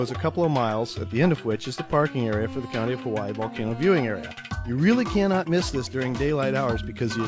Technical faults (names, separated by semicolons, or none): none